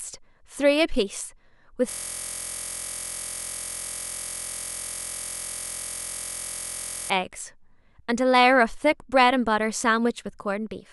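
From 1.90 s to 7.10 s the speech gives way to a system hang loop. The system stalled while the audio hardware kept replaying the same ring buffer, so a single 23 ms slice, which fits a 1024-sample buffer, repeats exactly for over five seconds. At 43.1 Hz those repeats fuse into a steady, pitched buzz. This buzz replaces the speech entirely until playback resumes.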